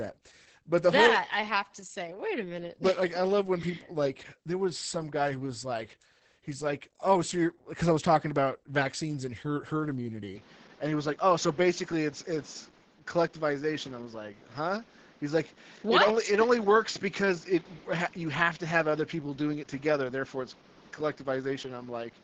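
Opus voice compression runs throughout. SILK's coarse low-bitrate coding, consistent with about 10 kbps, muffles the speech and leaves it hoarse and slightly robotic, with nothing above 8.6 kHz. From 10.36 s to the end, the input was likely switched to a poorer device. With no gap or level jump, the band narrows to 7 kHz, dulling the sound, and a new noise floor appears roughly 30 dB down.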